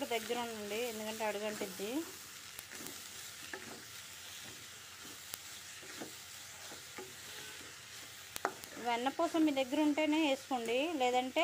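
Word clock ticks, 0.12 s to 11.39 s: sharp clicks about three times a second, as an unlocked receiving clock slips, dropping or repeating a sample.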